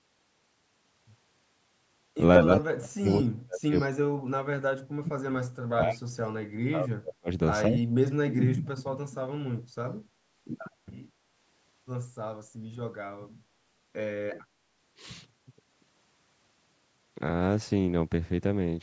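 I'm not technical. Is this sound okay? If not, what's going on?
No, not quite. Two things are going on.

The first is speech suppressed in double talk. From about 2.44 to 7.3 s, and again from 7.68 to 8.74 s, the voice keeps sinking, sometimes almost to nothing. That's likely the call's echo canceller getting confused while both people talked at once. It couldn't tell this talker apart from the other side's audio coming out of a loudspeaker, so it turned everything down.

The second is echo leak. Two faint, quick repeats of the voice played on the loudspeaker slip through, at 3.09 to 3.26 s and at 3.76 to 3.89 s. Each one trails the original by about a fifth of a second. They're quiet and brief, more like a ghostly scrap than a clear echo. The likely cause is that some of the sound from a speakerphone got past the echo canceller and was sent back down the line.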